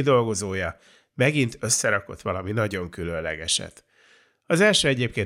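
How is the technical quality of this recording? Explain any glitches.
No glitches or technical faults can be heard here.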